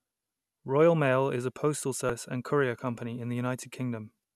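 Damaged data in a compressed stream occurs twice in this speech clip. At 2.07 to 2.10 s, just after "is a postal" and before "and courier company", corrupted bytes in the encoded stream cause the decoder to misread frames, lose sync and hunt for the next valid frame header. This produces a brief glitch. The same fault returns at 4.21 to 4.23 s near the end, as another short glitch where the decoder stumbles over bad frames.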